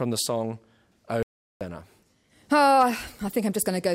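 A likely loss of the audio input, such as a dropped device link or an accidental mute, left the recorder writing silence, producing an audio dropout to silence in this speech clip from 1.23 s to 1.61 s. For about 0.38 s the speech cuts off abruptly and then resumes mid-flow, and the gap is dead silence with no room tone underneath, so whatever was spoken during that stretch is simply missing.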